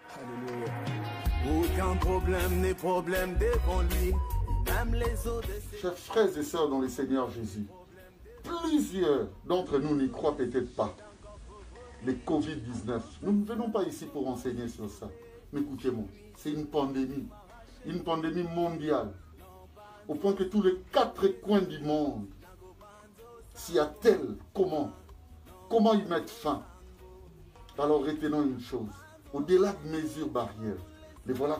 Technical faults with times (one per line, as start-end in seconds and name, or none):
9.53-13.45 digital radio blending to analogue